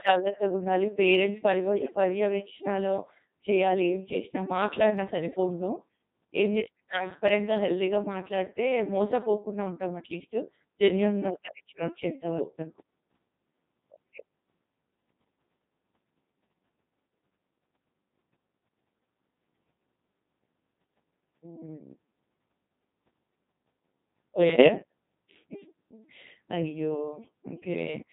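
Codec 2 vocoder coding runs through the whole recording, with heavy damage that points to a low mode of around 2.4 kbit/s. Rather than preserving the waveform, the decoder rebuilds the speech from a pitch track, voicing decisions, frame energy and a coarse spectral envelope, resynthesised as sums of sine waves. The result is a robotic, buzzy speech quality, and anything that is not a single voice is mangled.

Bit errors on digital voice radio strike at 1.80 to 1.96 s and again at 24.50 to 24.68 s. Each burst corrupts only a handful of vocoder frames, at an error rate of several percent, stronger in the first burst. Because every bit in such a compact frame controls pitch, loudness, voicing or spectral shape, flipped bits make the synthetic speech lurch in pitch and level and change timbre abruptly, breaking into brief bleeps, warbles and garbled robotic noise.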